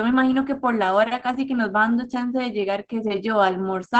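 Opus voice compression runs through the whole of this speech clip, plainly audible from start to finish. The band stops near 8 kHz, and the voice sounds muffled, hoarse and faintly robotic, which fits the SILK linear-prediction coder at roughly 12 kbps in 20 ms frames. Coarse excitation coding, not a simple low-pass filter, causes the damage. A filter would only dull the top, and MP3-style coding would add swirling pre-echo rather than this buzzy roughness.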